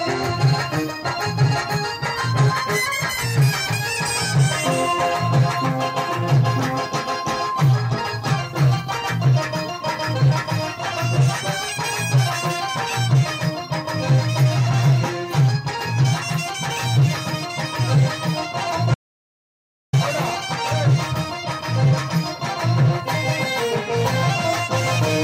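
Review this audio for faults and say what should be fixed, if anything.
An audio dropout to silence runs from 18.94 s to 19.93 s: the sound stops abruptly and returns just as abruptly, leaving nearly a second (about 987 ms) of silence with no room tone at all. The likely cause is the input being lost, through a disconnected device, a failed link or an accidental mute, while recording carried on writing zeros. On a waveform this shows as a flat line; on a spectrogram, a fully black vertical band spanning every frequency. The missing audio cannot be recovered from this file. Secure cabling and monitoring input levels live during capture would prevent this.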